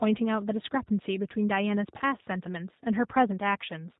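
From the first moment to the end, the speech carries the G.729 codec at 8 kbit/s, and the damage is plainly audible. The coder rebuilds each 10 ms frame from a vocal tract filter, a pitch predictor and a few sparse pulses, so the voice comes out rough and slightly synthetic. On a spectrogram everything above 4 kHz is empty, and harmonics look smeared and grainy rather than clean.

Between 1.98 and 2.02 s comes VoIP packet loss concealed by the speech codec. About 20 ms of audio went missing, which fits a single lost packet, and the decoder filled the gap by extending its last pitch and filter settings at falling gain. This is heard as a brief stretched sound, a buzzy tone or coloured noise, that fades, with the voice still weak or distorted for a moment afterwards. The waveform shows a short run of overly regular, repeating cycles shrinking in amplitude. On the spectrogram this appears as flat, frozen harmonic lines before normal detail returns.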